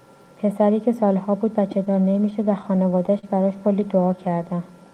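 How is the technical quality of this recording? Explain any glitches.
The recording suffers from one clear playback fault in the middle of the speech. Between 1.85 and 3.25 s there are repeated stalls (stutter). Ten short gaps occur in that span. Packets reached the receiver late, so its jitter buffer kept running dry. Each time, the receiver stretched the last sound to cover the wait. These fills total 136 ms, about a tenth of the span. The longest lasts 41 ms. Nothing is lost, but the speech drags and catches in a halting rhythm.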